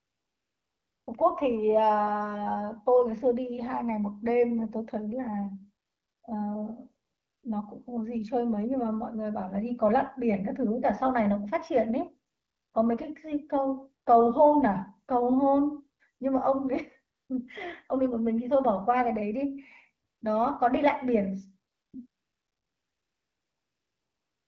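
AMR comfort noise fills eight pauses: 0.00 to 1.07, 5.85 to 6.23, 7.05 to 7.43, 12.31 to 12.73, 17.15 to 17.29, 20.05 to 20.21, 21.71 to 21.93, and 22.07 s to the end. Speech frames stopped. The receiver then played a smooth, synthetic hiss that switches in and out.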